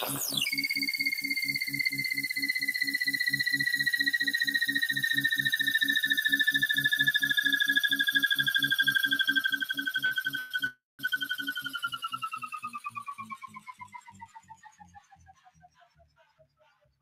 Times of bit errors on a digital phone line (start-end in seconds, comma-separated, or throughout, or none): none